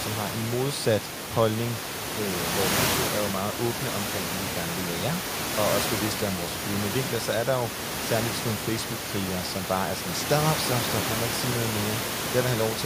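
No technical faults can be heard anywhere in the speech. Room noise sits underneath it throughout, only about 5 dB below the speech level, and comes from the recording space rather than the system.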